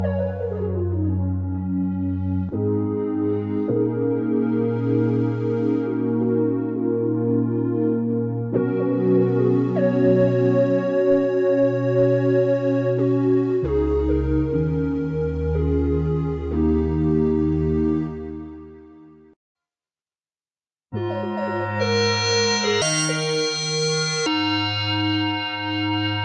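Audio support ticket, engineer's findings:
Wrong sample rate, 22.82–24.26 s: sound jumps 1.5x fast and about 7 semitones sharp. Playback seems to run at 24 kHz on 16 kHz material, no resampling in between.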